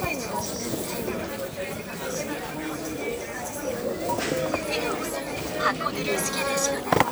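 From 0.32 to 6.83 s, clicks recur every 0.93 s, about seven in all. These are clock drift buffer slips, likely from mismatched device clocks skipping or repeating a handful of samples. They appear as thin vertical spectrogram lines and small waveform steps.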